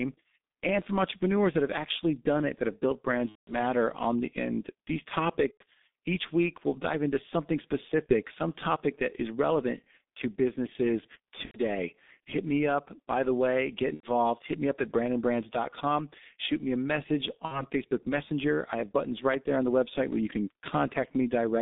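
From the start, the whole speech track has that G.723.1 codec sound: a low-rate telephony coder at about 6.3 kbit/s, squeezed into a line band of roughly 200 Hz to 3.7 kHz. The damage here is heavy. The coder works in coarse 30 ms chunks and its model of the voice lags behind, so everything comes out muffled and a bit hoarse, with consonants smeared and no top end at all.

On top of that there are six spots of VoIP packet loss concealed by the speech codec. They fall at 3.29 to 3.55 s, 5.51 to 5.63 s, 8.07 to 8.14 s (between "we'll dive into something" and "some topic that is"), 11.45 to 11.59 s (right after "is relevant to businesses"), 13.94 to 14.07 s, and 17.45 to 17.66 s (after "me a message"). The first gap sounds like about 180 ms of missing audio, which fits six lost 30 ms frames. The others are shorter, down to about 30 ms at 8.07 s. In each one the decoder keeps replaying its last pitch and filter at falling gain, so you hear the sound stretched and fading. 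The voice stays weak and warped for a moment after the audio comes back.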